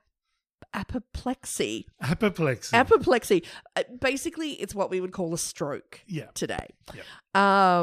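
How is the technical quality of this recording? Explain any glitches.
The recording has one clear technical fault, a single loud pop late in the speech.

Loud pop, 6.59 to 6.62 s: a short, sharp crack jumps out roughly 10 dB above the speech, lasting only a few hundredths of a second while the talking continues beneath it without a break. The likely cause is a sudden electrical step or spike, such as a connector being disturbed, a switch, a static discharge or a brief driver glitch, that got added to the signal and was then smoothed by the circuitry downstream into this single percussive burst.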